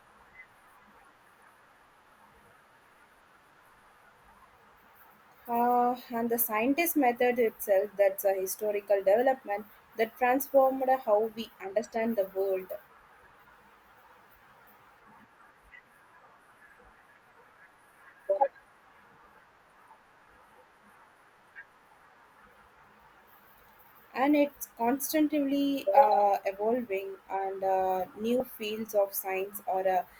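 Compressed frames skipped at 28.40 s, just after "uh evolving and uh": a short stretch of the speech, about 70 ms, is missing, so the talker appears to jump forward mid-flow. The gap's length points to a couple of whole 32 ms codec frames that were absent or discarded by the decoder as corrupt.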